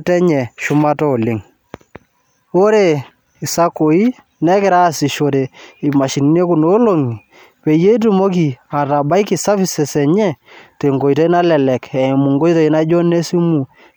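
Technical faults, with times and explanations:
No technical faults can be heard anywhere in the speech, so there are no times or explanations to give.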